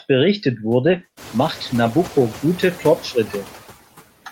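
Noise suppressor artifacts run through the whole clip. The suppressor pulls steady noise down by about 12 dB, frame by frame. The background sinks between phrases and swells back under the speech.

A call bitrate drop follows, from 0.87 s to 2.51 s, as the room noise climbs by about 21 dB around 1 s. The encoder falls from 32 kbps to 14 kbps and stays at its lowest for about 1.58 s. Coarser coding makes the speech rough and muffled, with the high frequencies cut. It clears at 2.51 s.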